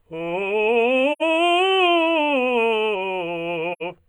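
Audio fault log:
throughout  channel delay (comb filtering): one channel trails by roughly 0.1 ms, a few samples, so the mono sum loses energy near 5 kHz, giving hollow music and evenly spaced dark notches on a spectrogram.
1.12–1.22 s  AAC frame loss with muting: 85.3 ms of music fades to silence and back, fitting about two lost frames; the waveform shows a soft-edged gap and the spectrogram a clean vertical blank band.
3.72–3.83 s  AAC frame loss with muting: muted holes scattered over about 170 ms, the longest near a tenth of a second, with 85.3 ms lost in all. They appear as tapered waveform dips and blank spectrogram columns.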